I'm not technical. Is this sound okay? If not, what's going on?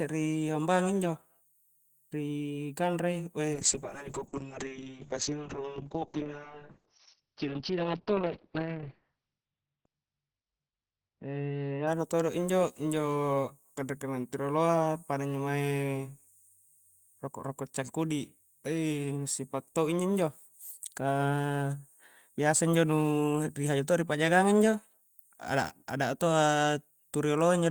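No. From 3.54 to 11.93 s the speech turns muffled and rough. This is a call bitrate drop: the connection squeezed the audio into far fewer bits.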